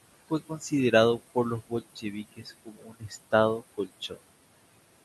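Throughout the clip there are noise suppressor artifacts: the suppressor pulls the steady room noise down by about 20 dB in the gaps, so the background pumps. Speech cut by the noise suppressor follows at 0.49–0.72 s, just before "por los", dipping about 11 dB. It recurs at 1.68–2.16 s right after "por los", then at 2.36–3.14 s and 3.60–4.19 s, reaching about 20 dB (about 16 dB in the last), so soft syllables and endings sound swallowed.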